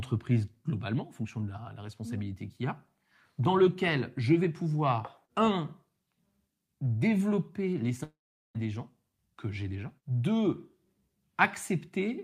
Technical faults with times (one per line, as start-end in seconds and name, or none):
8.03-8.56 long network dropout